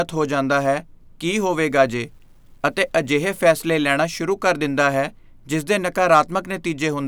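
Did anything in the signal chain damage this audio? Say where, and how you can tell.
Yes: low bit depth without dither, 1.54 to 4.00 s, likely sample-format truncation. Grainy, signal-tracking grit about 50 dB down fits 10 bits.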